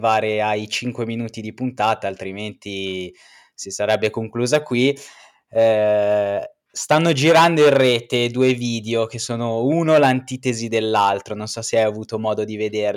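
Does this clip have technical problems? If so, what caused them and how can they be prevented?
No, there are no technical faults to be heard in this speech recording. With nothing going wrong, there is no cause to trace and nothing to prevent.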